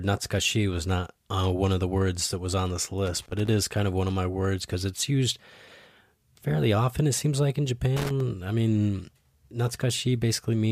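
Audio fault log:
3.06–3.47 s and 7.97–8.21 s, loose connector crackle: a worn or dirty contact makes and breaks in quick, uneven succession, chopping the speech and adding bursts of irregular crackle and scratching. On a waveform this shows as ragged dropouts and spikes. On a spectrogram it appears as scattered broadband vertical streaks.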